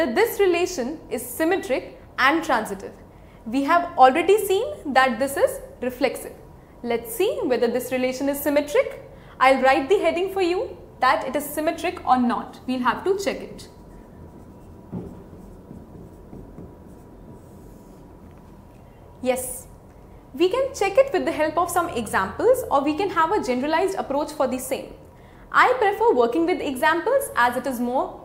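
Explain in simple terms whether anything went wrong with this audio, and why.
At 7.30 s there is a bit error spike: one stored digit in a single sample flipped, making the value jump and snap back as one tick.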